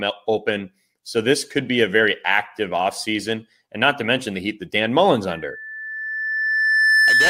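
From 5.29 s to 7.29 s, loudspeaker feedback squeal: the mic-speaker loop howls at 1.8 kHz, swelling into one bright horizontal spectrogram line.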